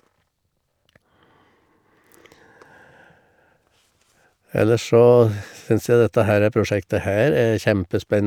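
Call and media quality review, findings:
No findings in this call and media quality review.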